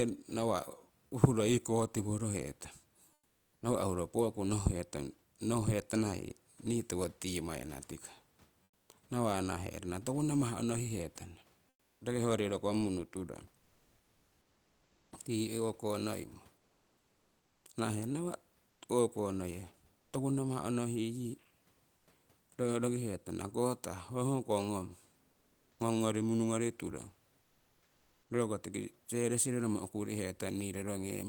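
Comfort noise replaces the background at 3.13, 8.63, 11.69, 13.59, 16.57 to 20.13, 21.97, 25.31 and 27.41 s. In these pauses the room noise gives way to steady, featureless hiss, up to about 12 dB quieter. Opus DTX is likely halting transmission during silence.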